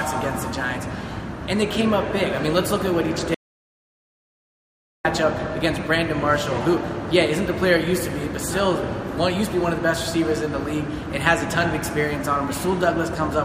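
At 3.35 s the sound cuts off abruptly into silence, with no room tone or noise floor, and resumes mid-flow at 5.05 s. This audio dropout to silence removes about 1.70 s of material, likely from the input being lost while the recorder kept writing zeros.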